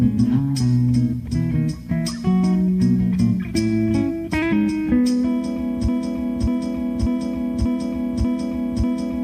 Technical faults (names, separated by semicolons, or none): broken-record loop